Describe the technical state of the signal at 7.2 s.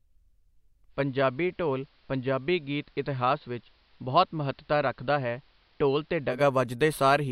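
At 7.2 s the signal is intact, with no audible dropout, distortion or other technical fault.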